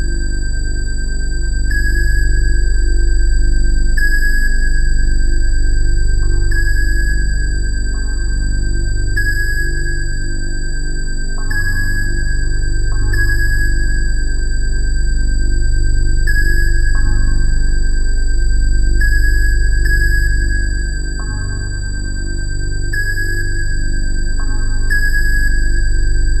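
Nothing in the audio stood out as a technical problem on listening.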